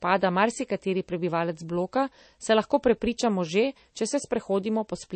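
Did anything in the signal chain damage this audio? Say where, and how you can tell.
Yes, at the codec stage, throughout the clip: the speech has a watery, swirly quality, with chirpy s sounds and smeared onsets, which points to MP3 compression, likely at a bitrate near 32 kbps. On a spectrogram weak components blink on and off between frames.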